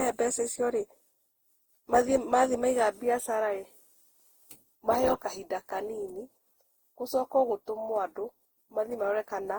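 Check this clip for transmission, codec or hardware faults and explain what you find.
The clip shows one codec fault, present throughout the speech. Generation loss: the audio was likely decoded and re-encoded around ten times with Opus at a rate that fits 48 kbit/s, each pass requantising on a shifted frame grid. Noise and spectral gaps accumulate, so the speech sounds swirly, smeared and hollow, with blurred attacks, while content still reaches about 20.1 kHz.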